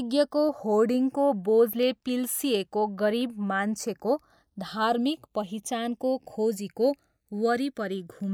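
Channels drifting apart runs through the whole recording. The left and right channels sound as if they were captured on devices with independent clocks that disagree by roughly a hundred parts per million, so the delay between them slides steadily and reaches about half a millisecond by the end. When the speech is folded to mono, the comb-filter notches this offset creates move slowly across the spectrum, giving a gradual, sweeping flanger-like coloration.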